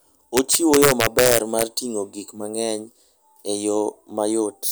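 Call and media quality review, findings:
Integer overflow, 0.37–1.63 s, ending just before "ting'o gik mang'eny". Violent cracks on loud speech peaks, harsher than clipping. Probable cause: gain or mix stage driven about 4 dB past full scale without saturation. Peaks wrap to opposite sign, flipping across the full range.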